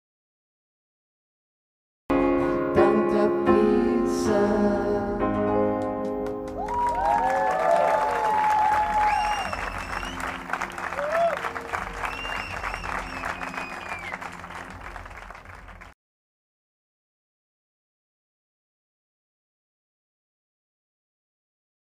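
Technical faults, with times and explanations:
0.0–2.1 s, audio dropout to silence: the clip opens already inside a dead gap, completely silent with no room tone, until sound cuts in abruptly at 2.1 s. The input was likely lost while silence kept being written. The waveform shows a flat line, and the spectrogram is empty until a hard vertical edge.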